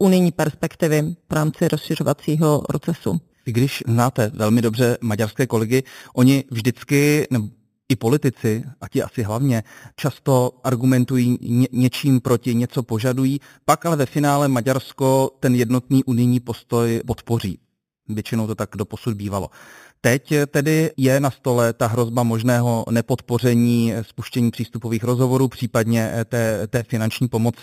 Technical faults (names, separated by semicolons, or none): imaging from sample-and-hold upsampling